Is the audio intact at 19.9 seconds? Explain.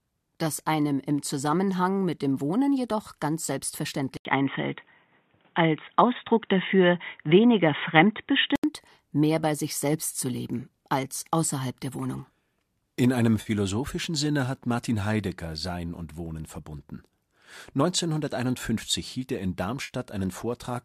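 No. From 19.83 to 19.91 s there is AAC frame loss with concealment. About 60 ms of the stream dropped out, which fits six short frames of the likely low-delay AAC coding. The decoder covered the gap by reusing the last good spectrum with randomised phase, so that patch sounds smeared and noisy. On a spectrogram, the harmonic striations blur into a flat, noise-like band there. The waveform shows a brief irregular stretch.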